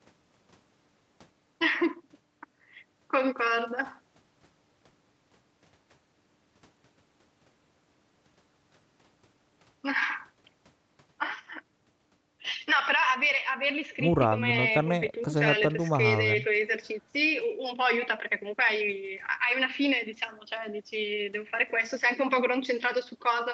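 Speech, with no technical faults to report. It has clearly passed through a call's microphone processing and codec, and the high end stops at about 8 kHz, which points to a wideband call setting.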